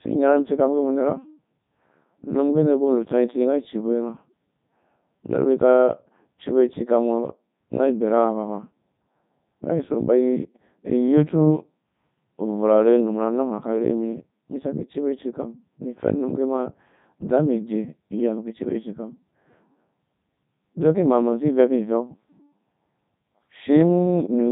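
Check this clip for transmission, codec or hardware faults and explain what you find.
The speech has a single codec fault, present from start to finish.

Codec 2 vocoder, throughout: the voice sounds heavily robotic and buzzy, and nothing comes through above 3.8 kHz. The waveform is not preserved. The decoder rebuilds speech from sine waves driven only by pitch, voicing, energy and a coarse spectral envelope. That produces the synthetic, buzzy timbre and the smeared detail heard here, which fits Codec 2 at its highest rate of 3.2 kbit/s.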